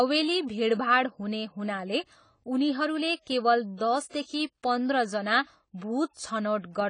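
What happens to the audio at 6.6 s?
At 6.6 s, as throughout the clip, the speech sounds dull and smeared, with plainly audible codec damage and nothing above 10 kHz. This is likely AAC compression at a low bitrate, consistent with about 24 kbps AAC-LC, which cuts high frequencies and quantises what remains coarsely.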